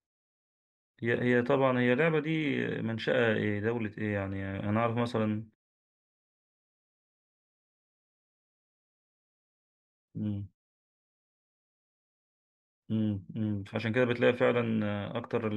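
Nothing stood out on listening to this speech recording.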